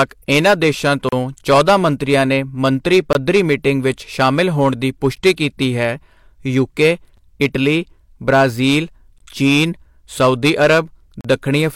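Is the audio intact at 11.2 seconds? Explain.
No. From 11.21 to 11.25 s the sound stops dead for about 37 ms, a gap between stream segments. The time stamps of two consecutive pieces of the stream fail to meet, and the player fills the space with silence. That explains the hard, clean edges on both sides. Unlike a dropout, nothing is missing: the sound resumes exactly where it left off, so the hole adds about 37 ms to the timeline rather than cutting anything out. The gap fits a stream packaged in 2-second segments.

Hard clipping also runs through this moment and the whole clip. The signal is overdriven by about 8 dB, so the loudest peaks, a small fraction of samples at around one or two percent, are cut flat. Those squared tops add high harmonics that come through as crackle and a brittle edge on loud syllables. This differs from gentle saturation, which rounds peaks off and sounds warm, and from codec smearing, which blurs detail without adding that sharp, peak-tied crackle.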